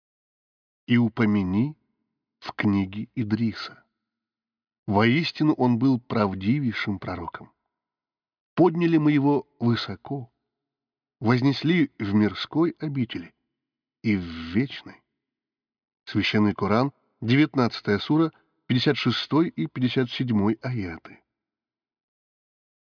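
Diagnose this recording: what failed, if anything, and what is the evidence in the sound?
Nothing in this speech recording points to a failure at any stage of the chain. No event in the sound serves as evidence of a fault, so there is nothing to diagnose.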